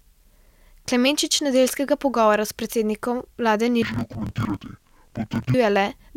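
From 3.82 s to 5.54 s, right after "pogovora s predsednikom vlade", the speech drops an octave and turns doubled and choppy. This is interleaved audio read as planar. Each block of alternating left and right samples is split in half, and each half is sent to one channel. Both channels then play their share at half speed, so pitch falls 12 semitones while the pace holds. The blocks last 23.22 ms, which fits a 1024-sample block, so the sound stutters at about 43.1 Hz.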